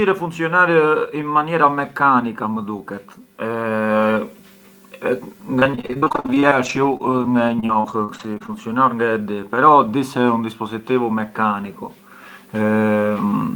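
From 5.59 to 8.54 s, repeated packet loss: gaps up to 42 ms, each filled by extending prior sound, giving choppy robotic speech, not silent dropouts.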